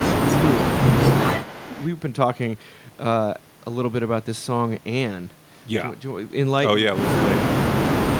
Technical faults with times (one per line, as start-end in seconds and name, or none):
0.00-0.87 speech suppressed in double talk
1.42-1.87 echo leak
1.62-1.69 speech suppressed in double talk
7.47-7.66 speech suppressed in double talk
7.91-8.08 speech suppressed in double talk